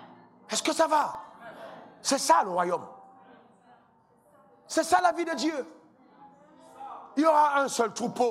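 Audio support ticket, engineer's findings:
CD scratch ticks, 0.89–1.94 s: nine regular ticks, roughly eight to nine per second, each under 2 ms. Disc surface damage; error correction overwhelmed once per revolution, player conceals with interpolation or muting.

CD scratch ticks, 4.99–5.64 s: six ticks at a similar rate, longest around 3 ms. Same once-per-revolution pattern from a scratched or blemished area on the disc.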